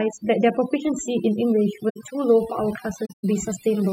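Overdone noise removal runs through the whole speech clip. The noise reducer was set too hard. It pulled individual frequency bands down wherever they sat near its noise estimate. Quiet parts of the voice went too. The background drops and breaks up into twinkling specks.

At 1.89 s a corrupt frame was concealed. The concealed stretch lasts about 0.08 s, which fits a few damaged AAC frames. The decoder detected the bad data and muted or smeared it. A longer concealed gap follows at 3.05 to 3.25 s, about 0.2 s, which points to several frames in a row.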